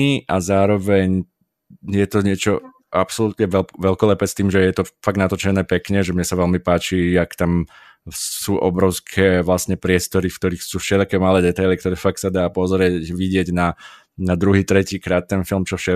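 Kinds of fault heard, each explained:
No faults heard.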